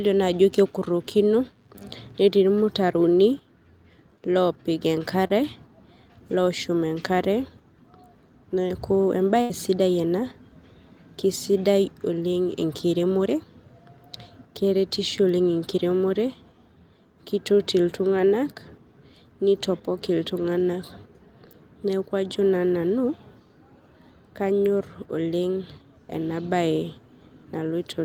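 At 5.27 to 5.32 s the speech gives a brief smear, a tiny wobble where the sound seems to hang for an instant before carrying on. This is short concealed packet loss: about 20 ms of audio never arrived at the decoder in time, so the receiver spent roughly 24 ms extending the last sound from what came before it, then cross-faded back into the real signal. The gap is short enough to blur rather than break the speech.

From 9.42 to 9.52 s there is a longer dropout. The last sound is held and fades for nearly a tenth of a second, then picks up again slightly further along, with a piece of speech gone. That is a burst of packet loss: about 80 ms of consecutive audio was lost or came too late to play. The receiver filled some 77 ms by continuing the last sound and turning it down as the gap lengthened, and resumed playback once packets returned.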